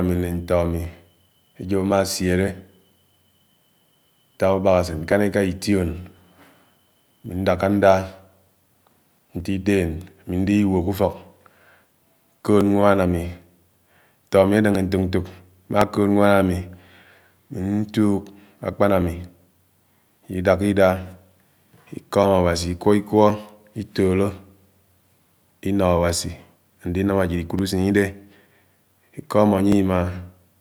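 A speech recording with a regular click or small pop recurring every 1.07 s while there is signal, from about 0.85 s to 29.72 s, roughly thirty ticks in all. The steady spacing is the giveaway: these are likely clock drift buffer slips, where two devices on independent clocks disagree by around a thousand parts per million, so the buffer between them creeps until a short block of a few dozen samples is dropped or repeated.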